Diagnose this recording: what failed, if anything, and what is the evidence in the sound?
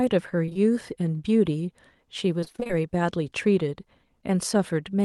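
The network stage shows short concealed packet loss from 0.45 to 0.57 s. Three back-to-back holes of about 20 ms each start at 0.45, 0.49 and 0.53 s. The decoder continued the last speech sound across them. This leaves a brief smear where real audio should be.

The network stage also shows repeated packet loss, giving a robotic sound from 2.41 to 2.71 s. Eight gaps, none longer than 20 ms, arrive in quick succession. Nearly half the stretch is synthetic fill. The speech turns choppy, with fragments missing.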